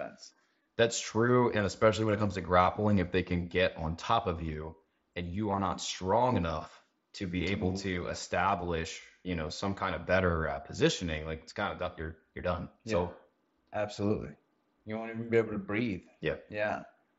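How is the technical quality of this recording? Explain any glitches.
The recording has two brief glitches from concealed Bluetooth headset packet loss. The audio runs through the mSBC headset codec, which passes content up to 8 kHz with light graininess on loud sounds.

At 0.63 to 0.65 s, and again at 5.51 to 5.59 s between "of you and you" and "not strong enough to", dropped packets were patched by repeating recent waveform. This gives a short, buzzy smear.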